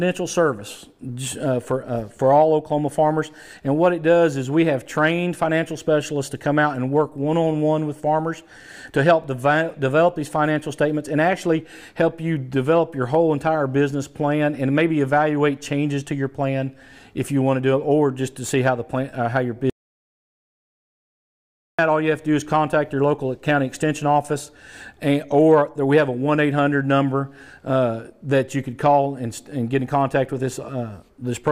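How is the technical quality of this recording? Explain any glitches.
The recording has one clear glitch, an audio dropout to silence from about 19.70 s to 21.79 s. For roughly 2.09 s the audio cuts out abruptly and then picks up again mid-flow. The gap is completely silent with no room tone underneath, which points to the input being lost while recording carried on writing silence. The likely cause is a disconnected device, a failed link or an accidental mute. Whatever happened during that stretch is gone.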